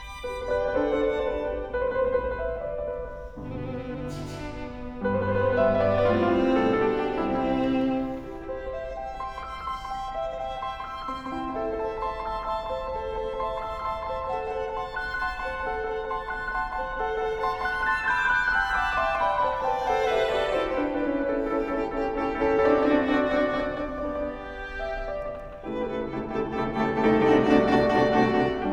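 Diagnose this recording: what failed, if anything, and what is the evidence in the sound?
Doubled audio track throughout: an equally loud, full-band copy trails by about a fifth of a second, dry and unreverberant, most likely a second, slower capture or routing path mixed in.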